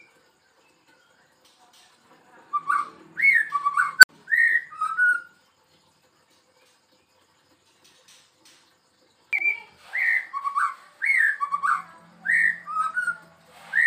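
At about 3.99 s there's an unstable filter: a recursive filter's feedback runs away, so a tone around 1.5 kHz balloons over roughly 43 ms into a loud clipped squeal, then the output collapses into about 61 ms of silence before the filter resets.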